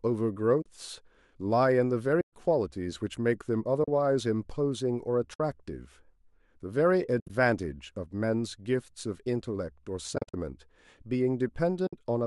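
AAC frame loss with muting occurs at 0.62 s (40 ms), 2.21 s (120 ms), 3.84 s (40 ms), 5.34 s (60 ms), 7.20 s, 10.16 s and 11.87 s (60 ms). The decoder zeroes each missing frame's spectrum, and the overlapping windows then fade the sound out and back in. This leaves soft-edged holes. At 7.20 to 7.30 s the losses are scattered, with a longest run of about 70 ms. At 10.16 to 10.34 s they are also scattered, with a longest run of around 50 ms. The gaps step in 10 ms units, which likely reflects the short frames of low-delay AAC, whose coding damage is light.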